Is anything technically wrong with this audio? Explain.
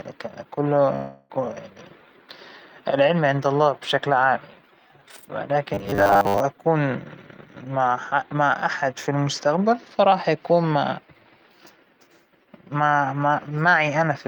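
Yes, two faults in this speech clip. From 0.95 to 1.38 s there's what sounds like a long network dropout: about 340 ms goes missing, and it's papered over with a smeared continuation of the last sound rather than silence. From 5.74 to 6.40 s you get robotic sound, likely from repeated short buffers. Roughly 10 ms chunks loop in place of most of the real audio, imposing a rigid, metallic 100 Hz buzz.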